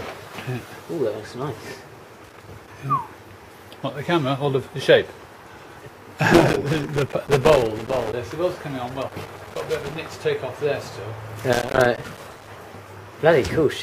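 Loose connector crackle breaks in at 2.24 to 2.68 s, 6.33 to 8.13 s, 8.88 to 9.96 s and 11.52 to 12.50 s. A worn or dirty contact keeps cutting in and out. The sound is chopped. Each burst is irregular scratchy crackle.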